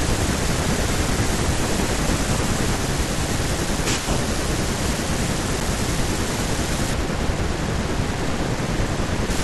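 Block of digital silence at 5.60 s in this speech: 8 ms of samples are replaced by zeros with no fade, so the abrupt edges leave a short tick.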